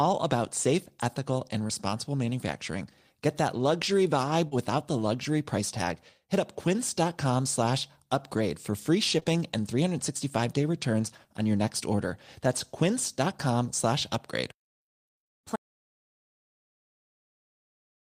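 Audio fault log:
1.67 to 1.71 s, 4.47 to 4.53 s, 9.19 to 9.27 s: short concealed packet loss. Each gap is brief, about 20 ms at 1.67 s and about 40 ms at the other two. The span at 9.19 s is two 20 ms losses back to back. The decoder never received that audio in time. It extended the preceding speech, from its pitch when voiced and as shaped noise when not, then blended back. Each one sounds like a short smear or wobble, and a consonant may drop out.
15.56 s to end: audio dropout to silence. The speech cuts off mid-flow and never returns. The gap is silent, with no room tone underneath. That points to silence being written after the input was lost, likely from a disconnected device, a failed link or an accidental mute. Nothing spoken after this point survives.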